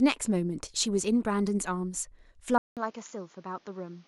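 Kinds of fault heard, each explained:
Input switched to a poorer device: at 2.58 s the speech cuts out for 187 ms, then returns about 10 dB quieter and duller, with nothing above 7.1 kHz and fresh background noise roughly 30 dB down, likely because recording jumped to a lesser microphone.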